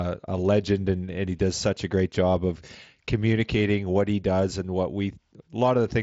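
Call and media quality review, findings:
No faults found; speech over mSBC headset link.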